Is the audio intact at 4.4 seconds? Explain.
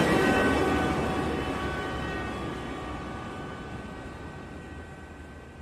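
Yes, the audio at 4.4 seconds is intact, with no fault present at that moment.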